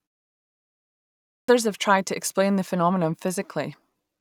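At 1.38 s, after about 1.4 s of silence, the speech comes back with a clipped start after a pause. The output device had idled during the quiet stretch and needed time to wake, so roughly 104 ms of the onset, up to 1.48 s, never reached the output. The first sounds of the word are missing and it begins abruptly. On the waveform the trace jumps from flat to speech level with no rise, and the spectrogram shows a hard vertical edge.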